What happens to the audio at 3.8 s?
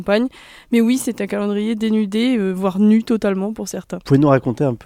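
Nothing goes wrong at 3.8 s; the audio plays through that moment intact, with no audible dropout, click, distortion or other fault.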